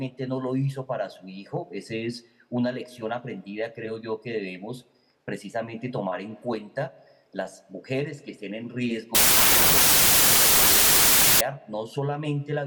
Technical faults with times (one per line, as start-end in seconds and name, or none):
9.15-11.41 wrong sample width